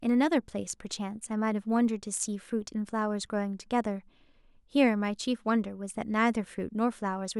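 Speech, with a steady 20 Hz tick running under it the whole way, coming and going with the signal. That's the resampler restarted on every block: each 50 ms chunk gets converted on its own, likely 44.1 kHz to 48 kHz, leaving a small glitch at every edge.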